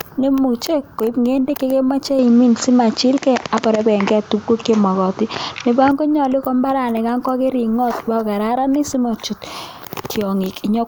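A speech clip. From 2.19 s, right after "neimuche koib ngendek chekemache", to 5.91 s, the sound turns duller, with nothing above 7.6 kHz, a level shift of roughly 5 dB and a new noise floor about 30 dB under the speech. There is no gap at the switch. This is likely an input switched to a poorer device. On a spectrogram the energy above 7.6 kHz disappears abruptly for that span, and the waveform's envelope steps in height.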